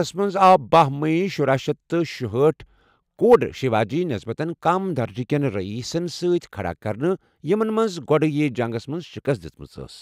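No technical faults can be heard anywhere in this speech recording.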